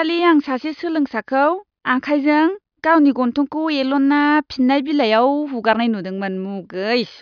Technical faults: none

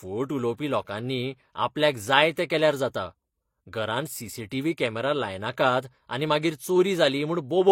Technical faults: transcoding between lossy codecs

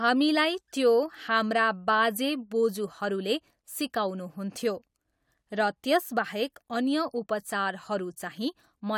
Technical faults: none

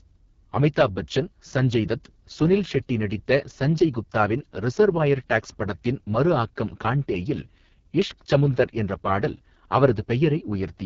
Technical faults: AMR wideband (HD Voice) codec

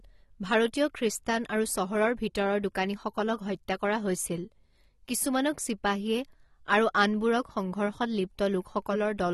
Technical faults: AAC compression

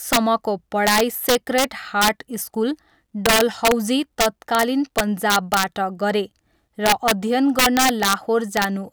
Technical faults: integer overflow

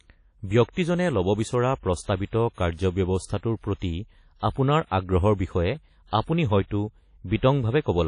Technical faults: WMA compression; pre-echo

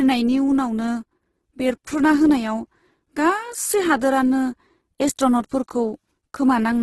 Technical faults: Opus compression

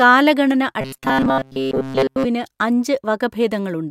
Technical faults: robotic sound from repeated short buffers

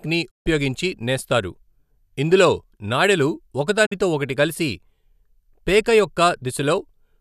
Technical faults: digital broadcast dropout

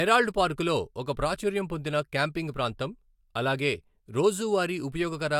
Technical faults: none

